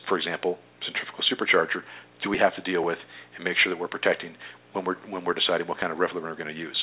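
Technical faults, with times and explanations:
No technical faults can be heard in this audio.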